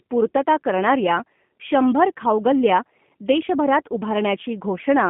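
Throughout, the speech carries G.729 codec damage: a rough, slightly synthetic quality from 8 kbit/s model-based coding. A spectrogram shows energy confined between roughly 150 Hz and 3.4 kHz, with nothing above, and smeared, simplified harmonic detail within that band.

At 0.35 s, just before "करणाऱ्या शंभर खाऊगल्ल्या देशभरात", VoIP packet loss concealed by the speech codec covers a gap of about 30 ms, which fits three lost 10 ms frames. The decoder repeats its last pitch and filter at falling gain, giving a brief stretched sound that fades. The waveform shows a decaying repetitive stretch, and the spectrogram shows the energy fading.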